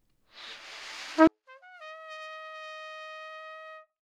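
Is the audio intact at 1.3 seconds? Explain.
No. From 1.27 s to the end at 4.01 s, the sound almost disappears in mono, dropping by about 40 dB. The likely cause is one channel inverted. With one stereo channel's polarity reversed, the shared content cancels when summed, leaving only a faint remainder.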